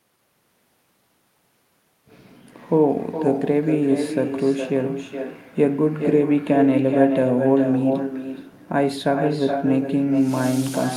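A speech recording with echo with no canceller throughout. Every phrase returns as a quieter, thinner copy about 7 dB down, trailing by around 400 ms. The far end's loudspeaker feeds its microphone. Nothing removes that return path, so the voice comes back after the network round trip.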